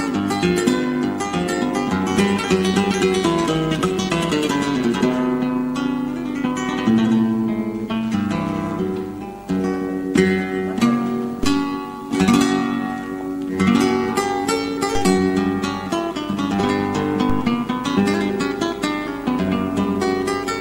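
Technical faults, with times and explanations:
Throughout: overlap-add ripple. Windowed frames were rejoined with an overlap that does not sum to constant gain, so the level dips and swells by about 6 dB once per frame, at around 100 Hz. That regular, metallic buzz across everything sets it apart from an effect-style tremolo.
11.43 s, 14.95 s, 17.30 s: DC step. The waveform's zero line jumps suddenly, then the offset drains away as a 2 Hz high-pass lets it decay. Each jump lands as a low thump while the sound runs on unbroken, which separates it from a dropout or splice click.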